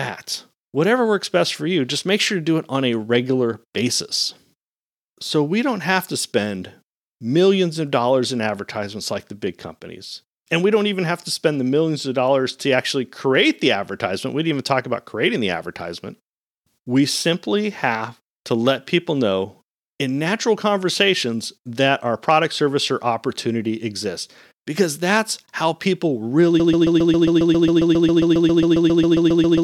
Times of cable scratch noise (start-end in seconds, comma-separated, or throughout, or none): none